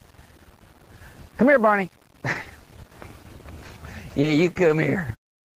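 Between 2.33 and 2.91 s the audio turns choppy and robotic. This is repeated packet loss: five gaps, none longer than 20 ms, each patched by extending the preceding sound, so about 14 percent of that stretch, some 80 ms, is filled in rather than real. Short concealed packet loss then smears the sound briefly at 3.67–3.71 s, 4.21–4.25 s and 4.67–4.71 s. Each time about 20 ms never arrived, and the receiver bridged it by continuing the last sound before blending back into the real signal. At 4.53–4.57 s there is a short stall from a late packet: the jitter buffer ran dry, the last sound was held about 20 ms too long, and playback then resumed from the same point with nothing lost.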